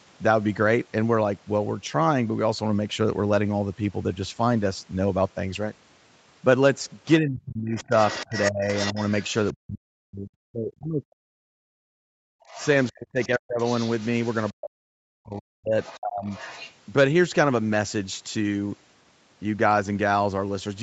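Other side's voice leaking through appears in this speech clip from 7.05 to 9.53 s, roughly 10 dB below the talker, then more faintly, around 20 dB down, from 12.48 to 14.52 s and 15.82 to 16.72 s. The likely cause is a loudspeaker's output reaching the microphone and not being fully cancelled. Speech suppressed in double talk overlaps these stretches: from 7.2 to 11.91 s, 12.91 to 13.6 s and 14.53 to 16.3 s, the talker's voice dips by as much as 40 dB or breaks up, adding up to roughly five seconds. This likely happens when the canceller, unable to separate the talker from the echo, turns both down together. Background gated by the echo canceller occurs from 12.19 to 12.48 s, where the room sound drops by about 38 dB for roughly 0.3 s and comes back once the canceller stops clamping the microphone during loudspeaker playback. Nothing is heard above 8 kHz, which fits the band limit of an Opus call path.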